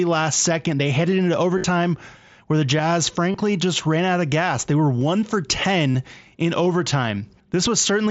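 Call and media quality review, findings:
Clock slip clicks, 1.14 to 8.09 s: faint, evenly spaced ticks about every 1.5 s, around seven in all, loudest on sustained loud speech. Likely two free-running clocks about 15 ppm apart, dropping or repeating one sample per slip.

Concealed Bluetooth headset packet loss, 1.58 to 1.64 s: scattered gaps totalling about 52 ms across 60 ms, longest run 30 ms. Buzzy held tone, slight warble on recovery. Headset link, last waveform repeated to fill gaps.

Same fault, 3.32 to 3.34 s: 22.5 ms loss, short repeated segment, buzzy held tone.

Same fault, 5.92 to 5.95 s: 30 ms loss, brief buzzy fill with a small warble at re-entry.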